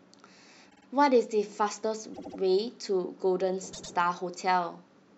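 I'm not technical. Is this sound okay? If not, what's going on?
No. The speech stutters three times, at 0.69, 2.13 and 3.72 seconds. That's repeated frames: a tiny chunk of audio, between a twentieth and a tenth of a second long, gets replayed two or three extra times, like a skipping CD.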